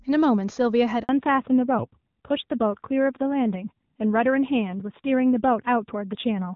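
At 1.03 s there's a handover gap: the call jumps from one network to another and no frames get through until 1.09 s, so for 60 ms the sound just drops out. It doesn't fade gently. It cuts to silence within a few tens of milliseconds and stays dead until the new link picks up, and whatever was said in that slice is simply gone.

From 1.09 s to the end there's a fallback to narrowband. Before the gap the clip has that clean HD Voice quality, with no obvious codec roughness, which fits AMR-WB running near its top rate of about 24 kbit/s. After the switch nothing above 4 kHz comes through, which points to AMR-NB at around 7.4 kbit/s. The speech loses its crisp upper end and sounds duller, boxier and a bit rougher, like a classic phone line.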